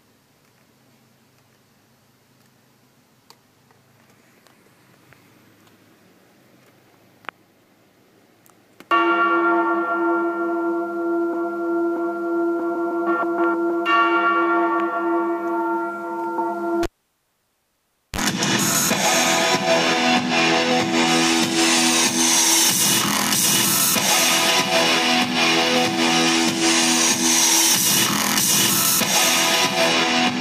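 Cable pulled and plugged in, 16.83 to 18.19 s: the live lead pops out, leaving 1.31 s of near silence, then 35 ms of 50 Hz mains buzz and a return pop.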